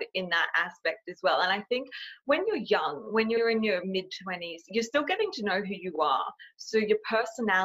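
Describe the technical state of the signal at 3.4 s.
At 3.4 s the stream hits repeated frames: between 3.36 and 3.41 s a 52 ms stretch of compressed data was delivered twice, which fits a pair of codec frames being written or sent again, and the decoder simply played them a second time. The ear hears a brief stutter, the same sliver of sound doubling back on itself, with a possible tick at the seam if the ends don't match, and everything after runs 52 ms late.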